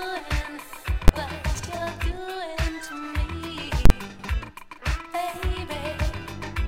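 Invalid numbers at full scale appear at 1.08 s and from 3.85 to 3.90 s: a calculation blew up into infinite or invalid values, and those samples were pinned at the largest possible level for a whole processing block. The first is a single sharp bang lasting about 12 ms, which fits a 512-sample block. The second runs about 46 ms, which fits a 2048-sample block, so it is heard as a very loud pop at each edge with dead silence in between. Frames out of order occur from 1.54 to 1.65 s and from 4.09 to 4.29 s: two neighbouring runs of coded frames were decoded in swapped sequence, so each stretch plays with its halves exchanged. The runs are about 46 ms each in the first case and about 93 ms each in the second, which points to groups of two and four frames respectively. Each sounds like a brief garbled flutter, and no time is lost from the sound.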